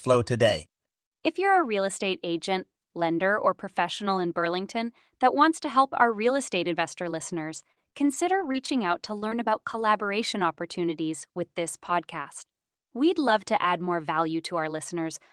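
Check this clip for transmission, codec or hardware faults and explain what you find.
Two transmission faults turn up in the speech, both around the middle and both from lost packets.

Repeated packet loss (robotic sound), 7.33 to 9.37 s, right after "our real estate investor". Seven short gaps, the longest 41 ms, were filled by stretching the preceding sound, about a fifth of a second in all. The speech turns choppy, with pieces missing. A spectrogram shows frozen, smeared harmonic stripes at each hole.

Lost packet rebuilt from error correction, at 9.72, 9.80 and 10.02 s, the last just before "opportunities with this podcast". Each 20 ms frame was rebuilt from a low-bitrate copy carried in the next packet, so nothing drops out. Those instants sound briefly rougher and grainier. The spectrogram shows thin, noisier vertical slices with no silence.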